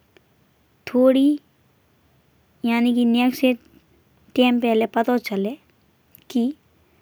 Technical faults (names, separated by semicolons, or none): none